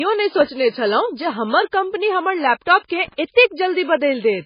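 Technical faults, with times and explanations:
Throughout: low-bitrate audio saved at a high bitrate. The speech sounds dull and smeared, with nothing above 5.1 kHz, likely a very low-bitrate MP3 later re-encoded at a high bitrate.
0.41 s: block of digital silence. A tiny tick as the sound drops to silence for 1.33 ms with no fade, which fits a 64-sample buffer left unfilled.
3.04–3.14 s: loose connector crackle. An irregular burst of scratchy crackle as a worn or dirty contact rapidly makes and breaks, chopping the signal.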